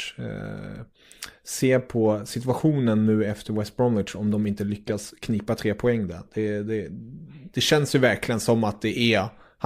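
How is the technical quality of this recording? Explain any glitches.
Nothing in the recording stood out as a technical problem on listening, so there are no glitches to explain.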